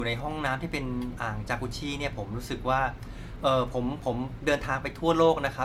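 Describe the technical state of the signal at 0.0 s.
At 0.0 s, generation loss runs throughout: swirly, hollow speech with blurred attacks and nothing above 17.1 kHz, likely from about five repeated re-encodes, more smeared than one encode at roughly 96 kbit/s would sound.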